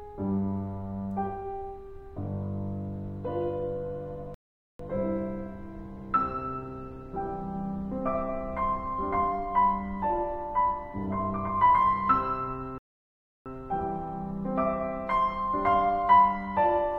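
Around 4.34 s the music drops to silence until 4.80 s, then again from 12.78 to 13.46 s: two rebuffering stalls, where playback ran dry and waited for more data. Each picks up exactly where it stopped, nothing skipped, just about 0.45 s and 0.68 s of added dead air.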